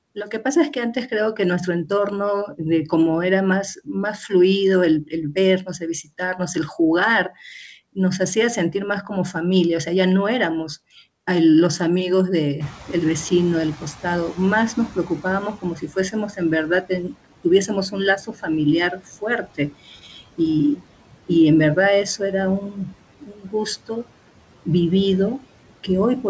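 Noise suppressor artifacts run throughout the clip. Steady background noise is pulled down by about 18 dB frame by frame, so the noise sinks between words and rises under them.

Speech cut by the noise suppressor appears at 0.15–1.9 s, 3.76–4.32 s, 5.06–6.56 s, 7.95–9.87 s, 13.8–20.85 s, 22.05–24.07 s and 25.4–26.25 s. Soft speech is mistaken for noise and dropped by about 11 to 18 dB, leaving faint, swallowed fragments. These last from a brief tenth of a second up to about a second and a half within the long middle stretch.

Noise suppressor catching up occurs from 12.6 to 15.76 s. The room noise jumps by about 20 dB around 12.5 s, and the suppressor's estimate lags. For 3.16 s the noise comes through too loud, then it settles with about 11 dB of reduction. The call path's band limit can be heard throughout as nothing above 8 kHz, which fits a G.722 wideband codec.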